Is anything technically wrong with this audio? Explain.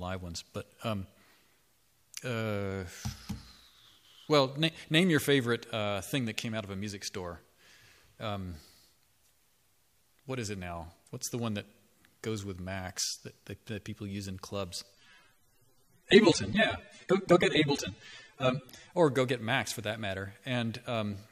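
Yes. From 14.93 to 18.93 s the adaptive stream drops to a lower bitrate, likely because the connection slowed, switching to a leaner encoding, which fits AAC at around 24 kbit/s instead of 96. For those four seconds codec artefacts rise, with an abrupt quality change and no gap.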